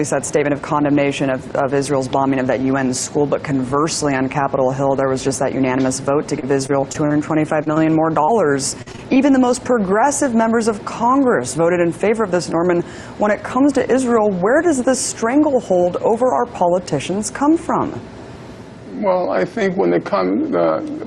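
From 6.39 to 7.12 s there's repeated packet loss (robotic sound): five separate holes, the longest about 40 ms, with roughly 140 ms of audio missing in total. The receiver kept patching each hole by carrying the last sound forward, and the next hole came along right behind it. About a sixth of that stretch is filler, so it comes across choppy and robotic, with bits chopped out.

Then three bouts of short concealed packet loss: 7.64 to 7.68 s, 7.74 to 7.78 s (about 20 ms each), and 8.24 to 8.30 s (about 40 ms). Each time a brief slice didn't reach the decoder in time. The receiver filled it by extending the preceding sound, following its pitch where there was one and using shaped noise where there wasn't, then eased back into the real signal. Each one comes across as a quick smear or wobble.

The repeated packet loss comes back from 8.82 to 9.18 s, with four holes, the longest about 43 ms and around 100 ms gone. 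It's the same patch-then-drop-again cycle, but denser. Over a quarter of that span is concealment, so the robotic, broken-up quality is packed into a shorter window.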